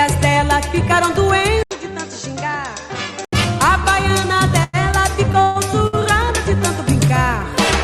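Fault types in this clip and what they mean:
Input switched to a poorer device: From 1.63 to 3.33 s the sound turns dull and boxy, with nothing above 8 kHz, a level around 10 dB lower, and a new noise floor roughly 35 dB down. An 80 ms silence marks the switch. The likely cause is the input moving to a narrower-band microphone or headset profile.
Call audio freeze: At 4.63 to 4.75 s and again at 5.42 to 5.57 s, the last sound hangs on as a fading buzz or hiss for about 100 ms and then 135 ms, with no true silence. Afterwards the audio resumes where it stopped, with nothing lost. Delayed packets likely left the jitter buffer empty.
Short stall from a late packet: Around 5.87 to 5.95 s a sound is held about 56 ms too long, with a slight buzz or dip, before carrying on from the same point with nothing missing. One packet arrived late, so the receiver stretched the previous audio to bridge the wait.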